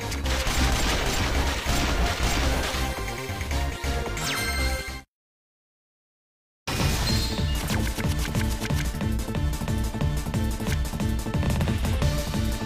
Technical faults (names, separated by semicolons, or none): low bit depth without dither